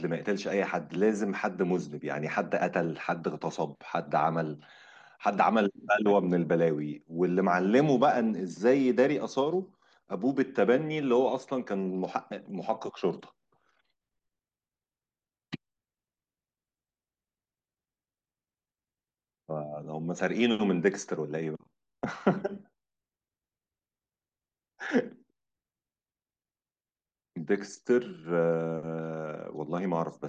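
No technical faults are audible anywhere in the speech.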